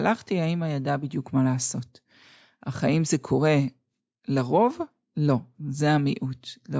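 Nothing here calls for comment, as the recording runs along without a single technical fault to point to at any moment.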